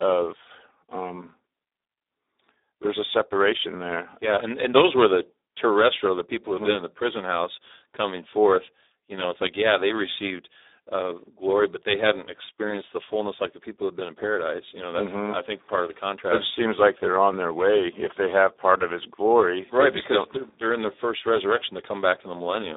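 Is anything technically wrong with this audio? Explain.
Yes. Throughout the clip the speech carries heavy Speex codec damage. This low-rate CELP coder has too few bits to model the excitation, so voicing turns hoarse, buzzy and partly robotic, consistent with a setting around 8 kbps. The sound is confined to a telephone-like band of roughly 300 Hz to 3.7 kHz, giving a thin, boxed-in tone. On a spectrogram nothing appears above 3.8 kHz, harmonics look smeared and noisy, and the waveform loses fine detail.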